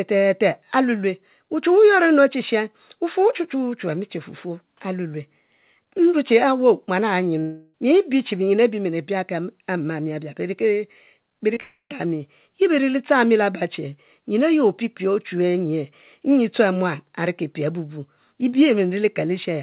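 A speech recording carried over a call, band-limited to nothing above 4 kHz, which points to G.711 mu-law. At 7.40 to 7.75 s the sound stretches into a fading buzz or hiss for about a third of a second, then resumes further on. It is likely a long network dropout. About 0.34 s of audio never arrived, and the receiver kept extending the last sound across the gap. A second likely long network dropout runs from 11.60 to 12.05 s. Here the fill lasts about 0.3 s and then drops to roughly 0.1 s of silence before the audio returns with that stretch missing. Just before it come two cases of short concealed packet loss, at 11.54 to 11.57 s and 11.58 to 11.60 s. Each gap of a hundredth or two of a second was patched by continuing the preceding sound. The result is a brief smear or wobble rather than a clean break.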